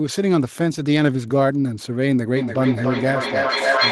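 From 2.36 s to the end of the speech, a feedback echo between two devices sets in: a second device in the room replays the call, and the first microphone recaptures it. Repeats arrive roughly every 300 ms and build up rather than decaying, peaking about 3 dB above the speech.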